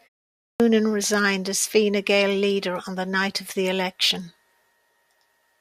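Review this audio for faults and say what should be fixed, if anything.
The speech comes in abruptly at 0.60 s, with no gentle onset, as if the front of the phrase leading into "resigned as" were sliced off. About 160 ms of sound is missing between 0.44 and 0.60 s. This is a clipped start after a pause: during the 0.44 s of silence at the top, the output device dropped into a sleep state, and it needed time to wake or relock before it could play anything, so the opening sounds were swallowed. The loss comes on the restart. To prevent it, keep the output path awake through silences by disabling device power-saving or feeding it a continuous low-level or silent stream.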